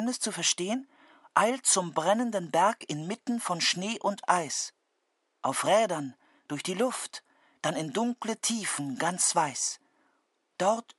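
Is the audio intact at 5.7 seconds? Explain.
Yes, at 5.7 seconds the audio is intact, with nothing interrupting, distorting or degrading the sound at that point.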